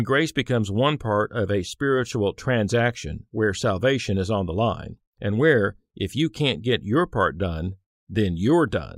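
No technical faults are audible anywhere in the recording.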